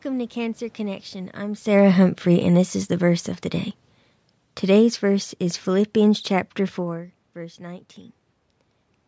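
Speech recorded through a call's microphone path, with one fault: automatic gain falling from 1.63 to 3.33 s, just before "the day". The gain control eased its level down by about 3 dB over those 1.7 seconds, and the room noise sinks along with the voice. That shared drop separates it from the talker moving, as happens around 1.5 s and again near 7 s, where only the voice changes and the background stays put.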